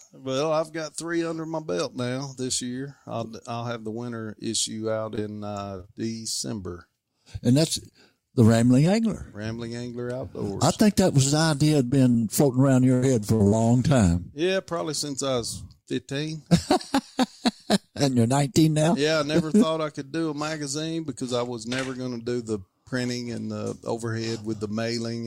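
Short concealed packet loss occurs at 5.15, 5.77, 5.81, 11.88, 12.12 and 12.20 s. Roughly 20 ms of audio failed to arrive each time, and the receiver patched the hole by extending the preceding sound, leaving brief smears or wobbles. Repeated packet loss (robotic sound) follows from 12.94 to 13.54 s: five gaps, the longest 79 ms, concealed about a third of that stretch, so it turns choppy.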